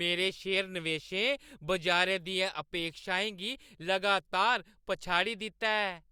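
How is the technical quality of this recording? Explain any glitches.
No technical faults can be heard anywhere in the recording, and the signal stays continuous and steady throughout.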